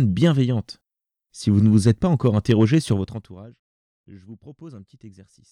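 From 2.87 to 3.5 s there's zipper noise: the level drops by around 25 dB, but in raw 2 dB jumps, roughly thirty a second, with no smoothing. Each jump clicks, so a fast ticking rides on the speech.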